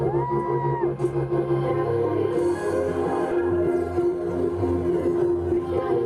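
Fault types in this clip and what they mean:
Skip ahead: At 3.31 s the audio jumps forward abruptly with no gap, the two sides butted together, and roughly a second of material simply never plays. A backlog of later audio was already waiting, so the skipped stretch was discarded outright.
Jitter buffer speed-up: From 3.41 s to 5.98 s the sound runs about 11% fast at unchanged pitch and feels hurried. The buffer was overfull, so the receiver repeatedly trimmed tiny pitch-period slices, about a third of a second in total, to cut delay.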